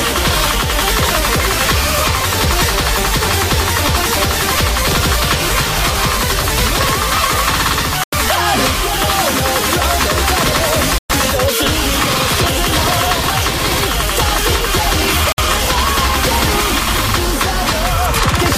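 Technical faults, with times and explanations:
8.04–8.13 s, 10.98–11.10 s, 15.32–15.38 s: Bluetooth stall. The sound drops to silence for 90 ms, 116 ms and 57 ms, then resumes. The likely cause is radio interference delaying packets, so the headphones' buffer ran empty and playback paused.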